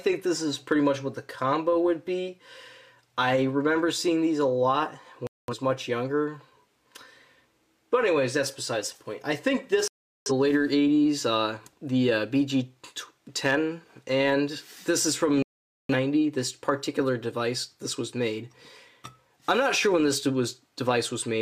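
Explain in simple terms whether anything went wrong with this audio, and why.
Three times the sound drops out: 5.27 to 5.54 s, 9.88 to 10.31 s, and 15.42 to 15.95 s. That's a digital broadcast dropout. The receiver lost clean data, muted until good frames returned, and whatever played during those gaps is simply gone.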